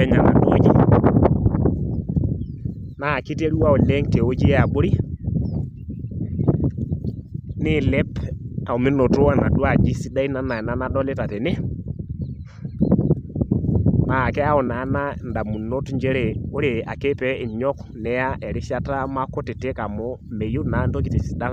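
No technical faults can be heard anywhere in this speech recording.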